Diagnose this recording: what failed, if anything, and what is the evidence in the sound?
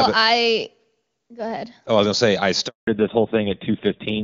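Network stage, handover gap: at 2.67 s the speech dies away into 200 ms of silence until 2.87 s. Frames went missing during the network switch, not a brief packet-loss concealment blip.

Codec stage, fallback to narrowband: from 2.87 s everything above 4 kHz vanishes and the speech turns duller and raspier, which fits a 5.9 kbit/s narrowband codec replacing HD Voice, not gradual filtering.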